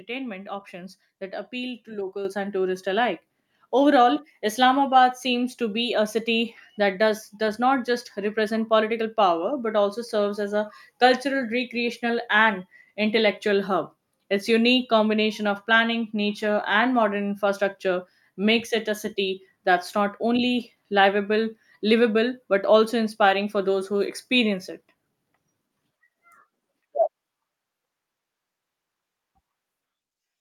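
Call software judged the microphone too quiet and raised its input volume in two steps: microphone volume stepped up by about 7 dB at 2.25 s, just before "and tourists alike", then by about 2 dB at 3.27 s, right after it. Both times, the speech and the background jump louder together.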